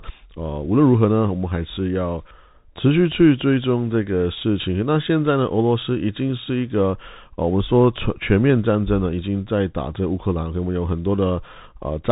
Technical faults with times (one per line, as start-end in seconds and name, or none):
0.00-12.11 Bluetooth CVSD headset codec